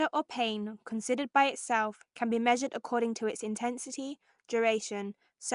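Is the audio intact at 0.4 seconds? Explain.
No. Nellymoser compression damage runs throughout, including at 0.4 s, likely from Flash's Nellymoser Asao codec at a rate near 44 kbps. Weak bands receive no bits and are refilled with noise, giving speech a rough, hissy halo and smeared underwater quality, with nothing above 10.6 kHz.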